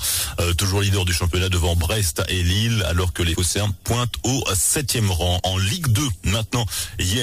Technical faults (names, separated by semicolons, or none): compressed frames skipped